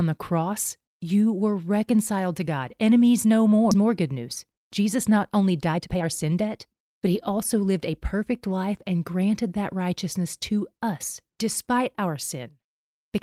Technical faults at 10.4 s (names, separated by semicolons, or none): none